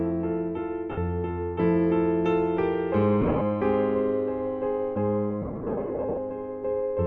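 Bluetooth LE Audio frames went missing three times, and the LC3 decoder filled each gap by repeating the last spectrum with scrambled signs: at 0.91–0.98 s (60 ms lost), scattered across 3.21–3.42 s, and heavily across 5.42–6.18 s, with runs up to around 70 ms. Tones smear into noisy hiss, fading during longer runs, over light lossy compression.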